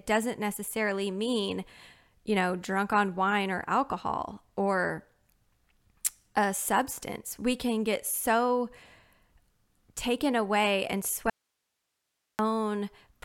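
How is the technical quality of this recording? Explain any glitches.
One glitch stands out. At 11.30 s, right after "taken away and", the speech drops out for about 1.09 s until 12.39 s, leaving only faint hiss roughly 55 dB below the signal. This audio dropout to a faint residue is likely a momentary signal loss with the path staying live. Its abrupt cut and return, with hiss persisting, distinguish it from a natural pause or fade.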